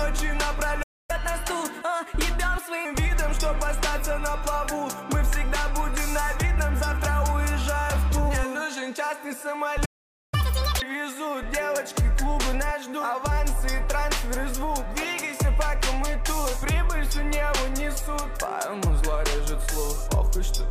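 At 0.82 s the audio cuts out for 0.26 s in a playback stall, most likely the player running dry of buffered data. The waveform drops to a flat line and the spectrogram shows a blank vertical band, before sound resumes at 1.11 s. From 1.11 to 2.85 s a catch-up at higher speed follows: the backlog is resampled at 1.15 times normal speed, so everything sounds hurried and roughly two semitones sharp. On the spectrogram, harmonic lines sit slightly higher and features are compressed in time. A second, longer stall runs from 9.85 to 10.34 s, a 0.47 s silent gap that looks the same. A much harder catch-up follows from 10.34 to 10.82 s at double speed, raising pitch by roughly ten semitones. That brief stretch sounds chipmunk-like, and its spectral content visibly jumps upward before settling back.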